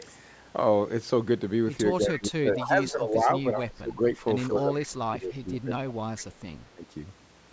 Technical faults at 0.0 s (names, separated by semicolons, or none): none